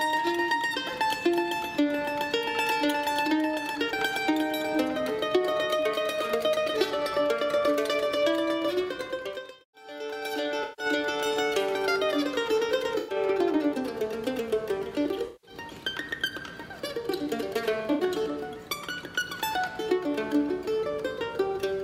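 AAC frame loss with concealment hits the audio four times, at 10.63, 12.97, 15.26 and 17.93 s: the decoder patches about 0.15, 0.11, 0.19 (scattered, longest run around 0.15 s) and 0.06 s from the last good spectrum, leaving brief smeared, noisy, phasey patches.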